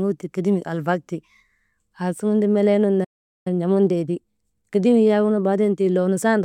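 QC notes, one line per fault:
3.04–3.47 s, playback stall: the speech cuts off mid-flow into about 0.42 s of silence, then resumes. The gap likely comes from the player running out of buffered data, or from its output thread being blocked until it could recover.
3.47–6.41 s, time-compressed catch-up: after the stall the speech runs 1.1 times faster at unchanged pitch. The player is trimming its backlog by cutting short segments and cross-fading the joins, which gives that hurried quality.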